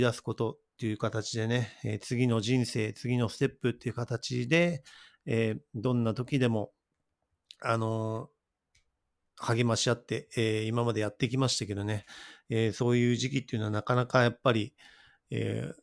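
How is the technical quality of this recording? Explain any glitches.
Nothing in the recording stood out as a technical problem on listening, so there are no glitches to explain.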